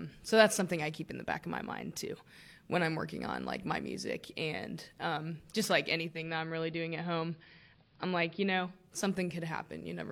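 At 5.93 s, just after "and um just like", the speech shows digital radio blending to analogue. The receiver loses the digital stream and cross-fades over about 384 ms to the station's AM broadcast. Level drops by about 2 dB, and a faint hiss sits roughly 40 dB below the signal. At 8.94 s the receiver blends back to digital.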